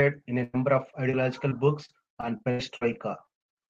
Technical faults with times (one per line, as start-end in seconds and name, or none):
0.39-0.55 lost packet rebuilt from error correction
0.43-0.55 burst of packet loss
0.91-3.35 repeated packet loss (robotic sound)